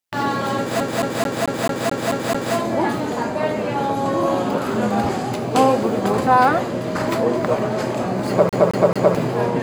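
From 0.80 to 2.55 s, and again from 8.49 to 9.15 s, it's a CD stuck on one turn: a scratch keeps knocking the laser back, looping about 219 ms with a tiny mute at each jump.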